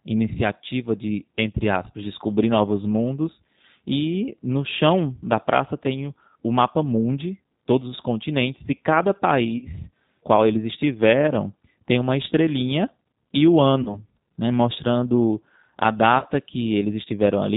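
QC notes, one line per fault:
throughout, G.729 codec: The audio passes through a low-rate CELP speech coder, consistent with G.729A at 8 kbit/s. It rebuilds each 10 ms frame from a vocal-tract filter, a pitch predictor and a handful of pulses, and discards everything above 4 kHz. The speech therefore sounds dull and band-limited, with a plainly audible rough, synthetic grain.
9.58–9.70 s, 13.83–13.99 s, 16.19–16.24 s, VoIP packet loss concealed by the speech codec: About 30 ms of audio goes missing at each point, which fits a single lost packet each time. The decoder fills the gap by extending its last pitch and filter settings at falling gain. The first occurs after "os continentes e cada" and before "qual eles estiveram tem". The second follows "uma estrelinha e o" and comes before "né mostrando a". The third comes after that same "né mostrando a". Each gap is stretched into a fading sound, and the sound stays weakened until the predictor recovers.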